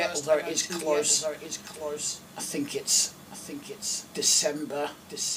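Throughout the clip, a doubled audio track is audible. A second copy of the same sound runs about one second behind the first. It sits roughly 10 dB below the original. The copy is full-band, with no decay or room colour, so it is not an echo from a space. This most likely comes from the signal being captured twice through a slower path, or an edit stacking two copies out of step.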